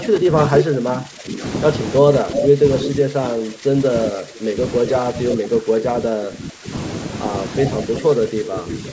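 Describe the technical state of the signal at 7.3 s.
At 7.3 s the speech is intact, with no dropout, distortion or glitch, only the ordinary band-limiting of call microphone processing, which trims the lowest bass and leaves nothing above 8 kHz.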